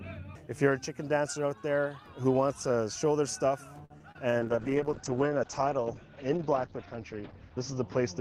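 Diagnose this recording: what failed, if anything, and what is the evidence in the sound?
At 3.85 to 3.92 s the network path delivered a packet late and the jitter buffer ran dry. This is a short stall from a late packet. The receiver held the last sound for 48 ms and then resumed without losing anything. A waveform shows a repeated, flattened stretch, and a spectrogram shows smeared horizontal bands.

Two short concealed packet losses follow in the network and decoder stage, at 3.98 to 4.02 s and 4.12 to 4.17 s. There, 20 ms and then 40 ms of audio never arrived in time and were replaced by extrapolated sound. Each is heard as a brief smear or wobble, and each shows as a blurred patch in the spectrogram.

From 4.41 s to the end, a call bitrate drop takes the Opus encoder from 48 kbps down to 8 kbps, where it stays for about 2.7 s. The audio turns rough and muffled. In the spectrogram, energy above 8 kHz vanishes, because the audio bandwidth shrinks from 20 kHz to 8 kHz.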